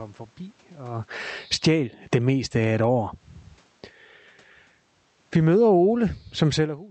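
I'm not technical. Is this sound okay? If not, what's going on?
No. The speech level keeps being pulled down and pushed back up by the system's own volume control.

First, automatic gain falling. From 1.38 to 2.99 seconds, and again from 5.2 to 5.74 seconds, the control decides the speech is too loud. It turns the volume down gradually. The voice and the room background sink together.

Then, automatic gain rising. From 1.73 to 3.38 seconds, and from 5.66 to 6.35 seconds, the control decides things are now too quiet. It turns the volume back up slowly. Voice and background swell together.

These overlapping turns make the level pump down and up. The talker also seems to shift position around 1 second and 6.5 seconds, which changes how loud they are at the microphone. That is natural, not a fault.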